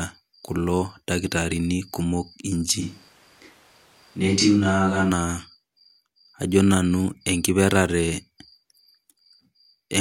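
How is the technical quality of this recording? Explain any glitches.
The recording has one glitch, in the middle of the clip. A switch to a distant microphone runs from 2.83 to 5.09 s. The close microphone's feed likely dropped out, leaving a pickup further away. The speech abruptly turns hollow and roomy with thinner bass, and background noise rises to about 35 dB below the speech while the level stays roughly unchanged.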